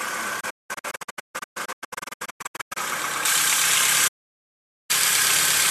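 The audio suffers a digital broadcast dropout from 0.40 to 2.77 s. The sound mutes in short holes, each fading out over about 8 ms. Around 1.5 s is lost in all, and the longest hole is 192 ms. The receiver was likely discarding bad frames, which fits 24 ms frames. A second dropout runs from 4.07 to 4.91 s, losing about 0.8 s. From 3.25 s to the end, pre-emphasis is left on. The treble sits about 11 dB high at 10 kHz relative to 1 kHz, consistent with an uncorrected J.17 curve. The sound turns thin, bright and sibilant.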